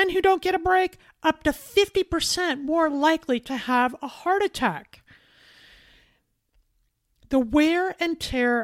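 No technical faults are audible.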